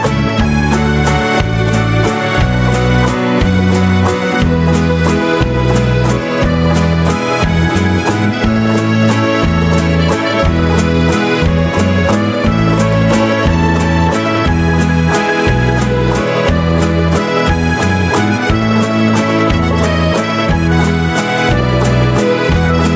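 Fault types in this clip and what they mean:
Gain pumping: Throughout the clip, the gain swings by around 5 dB, so everything sits squashed and flat. That's likely a far-too-hot mic gain with a fast limiter clamping down on every peak.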